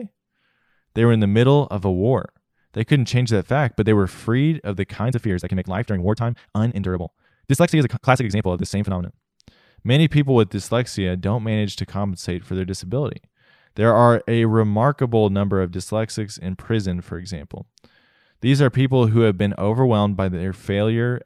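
A time-stretched section runs from 4.95 to 9.15 s, right after "were freed of the". The speech abruptly rushes at 1.83 times its pace with unchanged pitch, likely because software squeezed it by discarding short slices.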